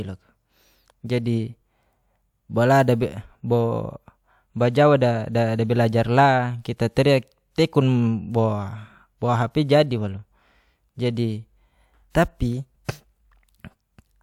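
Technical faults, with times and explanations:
No technical faults can be heard in this speech recording. There is nothing here that needs a time or an explanation.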